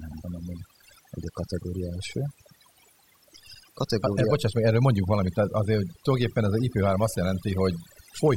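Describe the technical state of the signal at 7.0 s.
Overdone noise removal runs through the whole clip, 7.0 s included. Bands near the noise estimate get gated off, leaving a lowered background that breaks up into twinkling specks. On a spectrogram this shows as scattered isolated time-frequency dots.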